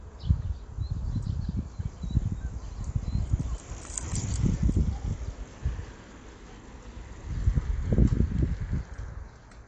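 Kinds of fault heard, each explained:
AAC compression: The audio stops dead above 8.7 kHz, and coding damage is plainly audible throughout, which fits AAC-LC at around 32 kbps as the likely cause. Unlike a simple low-pass filter, this lossy coding also smears and roughens what remains below the cut-off.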